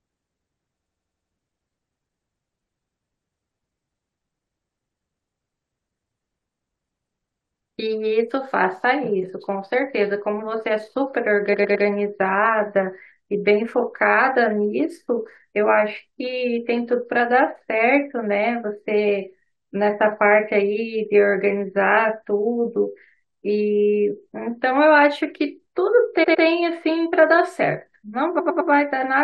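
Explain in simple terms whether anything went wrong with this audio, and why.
The speech stutters four times because of repeated frames: at 0.80 to 1.31 s, 11.53 to 11.85 s, 26.23 to 26.44 s and 28.38 to 28.70 s. Each time, a slice of sound about a tenth of a second long plays again two to six times in a row. Unlike a dropout, nothing goes missing. The same fragment plays again exactly, not fading like an echo, and each stutter makes the clip slightly longer.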